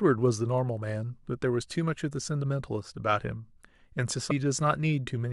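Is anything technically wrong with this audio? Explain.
Yes. At about 4.30 s the speech is broken by a brief glitch. That is damaged data in a compressed stream: corrupted bytes made the decoder misread frames, lose sync and jump to the next valid frame header.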